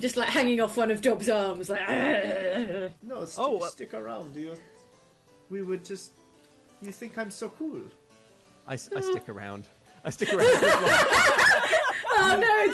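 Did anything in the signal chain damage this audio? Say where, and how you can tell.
No, nothing in the chain stood out as damaging on listening, with the sound arriving through the call path as that route would normally deliver it.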